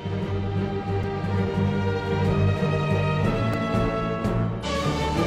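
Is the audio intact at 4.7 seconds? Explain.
No. At 4.7 seconds the stream is still coming out of a patch of damaged data in a compressed stream, which runs from 4.60 to 4.66 s. Over those 54 ms the decoder meets corrupted bytes and cannot parse the frames. It loses sync and has to hunt for the next valid frame header. The result is a brief chirp or squawk-like blip instead of clean sound.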